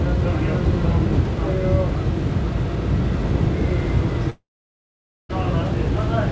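From 4.30 to 5.31 s, likely a long network dropout: a brief fading buzz then 0.86 s of silence, where short losses stay patched over.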